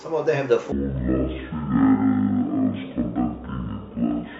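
Stereo read as mono from 0.72 s to the end: left and right samples are taken alternately as one channel, so the speech runs at half speed and sits an octave (12 semitones) low, with a faint mirrored copy high in the spectrum.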